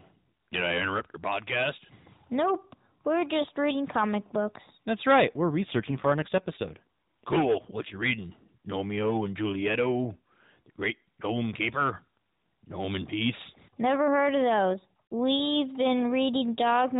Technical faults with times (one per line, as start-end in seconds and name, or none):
5.28-7.98 AMR rate drop